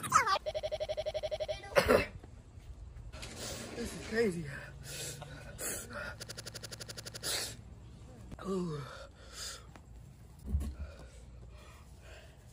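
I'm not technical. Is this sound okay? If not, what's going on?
No. A system hang loop occurs from 0.51 to 1.54 s and again from 6.23 to 7.25 s. The computer briefly froze while the sound hardware kept replaying its last 85 ms snippet, about twelve times a second, giving a rapid machine-gun stutter.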